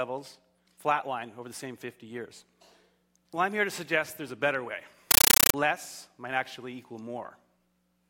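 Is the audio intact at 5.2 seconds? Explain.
No. From 5.11 to 5.54 s, a compressed stream is played as audio. An undecoded AC-3 bitstream, which fits a 448 kbps stream, is output as raw samples. Each frame becomes a 9.3 ms noise burst followed by zero padding, repeating 31.25 times a second, heard as loud chattering static.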